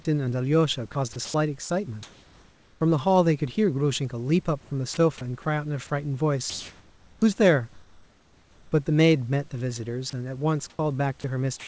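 Between 0.92 and 2.81 s the speech turns choppy: about a second's worth of quieter syllables and word edges give way to flat hiss. This is sound chopped by the voice detector, most likely the sender gating out low-level speech and the receiver filling the gaps with comfort noise. The same choppiness returns from 4.61 to 5.90 s, where roughly 0.2 s is replaced.

From 6.50 to 7.22 s, and again from 7.73 to 8.72 s, the pauses carry a steady, featureless hiss instead of the room's own textured background. The real background sits about 32 to 35 dB below the loudest speech. The fill is about 2 dB off in the first gap and matched in level in the second. This is comfort noise in place of the background, likely because the sender stopped transmitting during silence and the receiver synthesised noise.

At 10.10 to 10.13 s a brief scrap of speech, about 20 ms, vanishes into steady noise before the sound resumes. 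This is sound dropped by the voice detector, likely a quiet fragment mistaken for background. From 10.70 s to the end, the speech is chopped again, with about 0.2 s replaced by synthetic noise. Throughout, the audio has nothing above 8 kHz, consistent with a wideband call codec.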